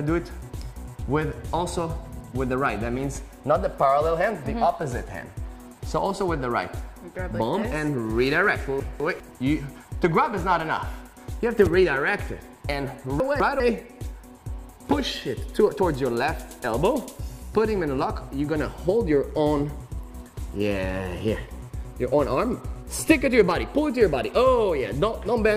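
Two brief jumbled moments, at 8.8 to 9.2 s and again at 13.2 to 13.6 s, are chunks out of order: within each 0.4 s span, a 200 ms block of audio plays one block late, after the block that should follow it. Nothing is missing, but the sequence is scrambled, creating three hard joins per event. On a spectrogram these show as abrupt vertical seams where harmonic or spectral contours jump discontinuously; the waveform shows sudden level and phase steps at each join.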